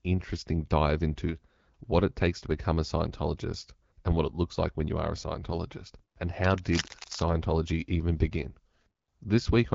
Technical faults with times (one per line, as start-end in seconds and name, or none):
6.44-7.29 cable scratch noise